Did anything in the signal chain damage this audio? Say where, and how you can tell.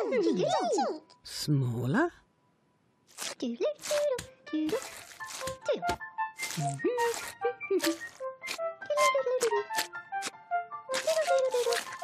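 Yes. At the codec stage, damaged data in the compressed stream causes a brief blip from 5.91 to 5.95 s, where the decoder misreads corrupt frames and loses sync.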